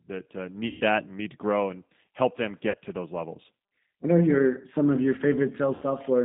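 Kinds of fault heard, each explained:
G.729 codec: the whole speech clip runs through a narrowband 8 kbit/s coder, with nothing outside roughly 150 Hz to 3.7 kHz, so it sounds muffled, slightly rough and synthetic. The voice is rebuilt from a filter, pitch and sparse pulses rather than carried faithfully.
VoIP packet loss concealed by the speech codec: three gaps where the decoder guesses from its last pitch and filter and fades out. There's 140 ms after "that uh", 40 ms after "grow and help them", and 60 ms near 5.75 s, each stretched out from the sound before it and fading away.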